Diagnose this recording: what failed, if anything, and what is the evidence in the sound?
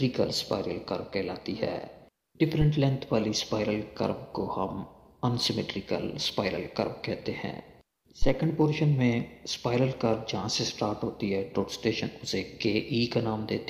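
A phantom power thump occurs twice in the analogue input stage, at 2.61 to 2.67 s and 8.22 to 8.31 s, peaking at about -18 and -13 dBFS and dying away within 13 and 20 ms. Each marks a supply switching on or off on the live input, its voltage step passing through the coupling capacitors.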